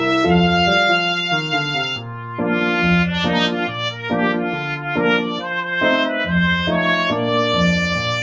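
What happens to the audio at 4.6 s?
From 4.55 to 4.9 s, the sound is cut by the noise suppressor, which mistakes it for noise and ducks it by about 6 dB. The waveform envelope visibly dips while the spectrogram fades. This happens within a noise suppressor applied to music or sounds throughout: the speech-tuned processing treats sustained content as noise, so the level pumps by about 5 dB. On the spectrogram, held energy thins between brighter attacks.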